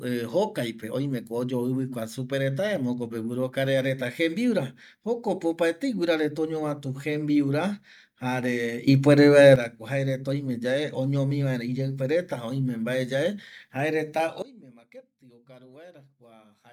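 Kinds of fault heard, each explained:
Sudden gain jump: speech and background noise step up together by about 10 dB from 8.88 to 9.56 s, then fall about 22 dB from 14.42 s onward, likely an unramped gain change. The waveform shows abrupt envelope steps, and the spectrogram brightens, then darkens, across all frequencies at once.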